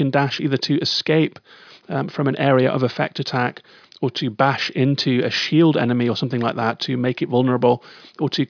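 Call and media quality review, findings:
No audible faults found in this speech recording.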